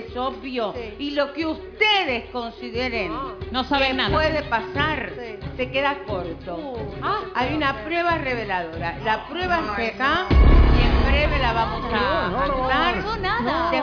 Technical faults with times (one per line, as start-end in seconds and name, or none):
none